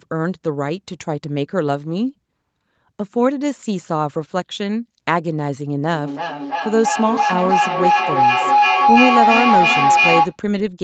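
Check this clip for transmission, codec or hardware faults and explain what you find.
There is one fault, a feedback howl in the second half of the speech, heard over the call's normal microphone processing with content extending to 8 kHz.

From 5.88 s to 10.4 s, feedback howl builds as the microphone-to-loudspeaker loop gains level each trip, narrowing to a tone around 700 Hz, with a loop delay of roughly 0.3 s, and peaks about 4 dB above the speech. A spectrogram shows a brightening horizontal line. The waveform swells.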